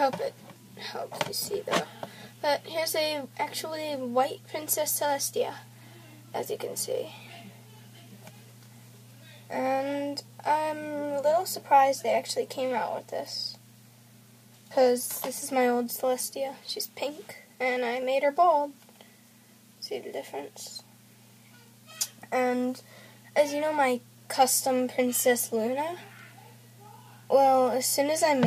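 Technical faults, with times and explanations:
No technical faults are audible anywhere in this audio.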